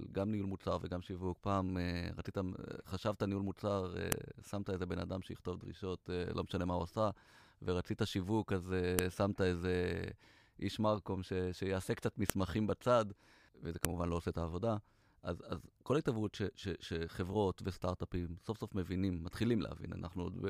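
Separate pieces of this speech recording were joined without stripping their WAV headers, so the header bytes at each joint are played back as if they were audio samples. That file header played as audio shows up as a sharp, loud click at 4.12 s, 8.99 s, 12.30 s and 13.85 s. Each snap is over almost instantly and cuts straight through whatever the speech is doing at that point, marking where one piece ends and the next begins.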